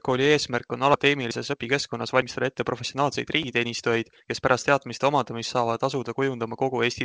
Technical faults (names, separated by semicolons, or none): skip ahead; jitter buffer speed-up